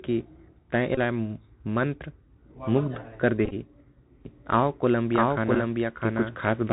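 The whole clip carries the Bluetooth CVSD headset codec. Its one-bit delta coding, which fits a 64 kbit/s CVSD stream, plainly damages the speech. Nothing above 4 kHz survives. S sounds turn scratchy, and a granular hiss sits underneath.

At 0.95 to 0.99 s comes a Bluetooth headset packet repeated. Lost packets are replaced by the last packet's bits, over about 22.5 ms. The repeats make a short buzz near 267 Hz. That fits a run of six lost packets.

From 4.25 s to the end, the speech runs twice. This doubled audio track has a full-band copy about as loud as the original, roughly 0.7 s behind. It has no decay or room colour. A second capture path is the likely cause.

A further repeated packet run spans 3.45 to 3.54 s. It covers 33.8 ms of loss scattered over 60 ms, with the longest run around 15 ms. Another brief one comes at 5.55 s, covering 11.2 ms. Each gives a short buzzy stutter.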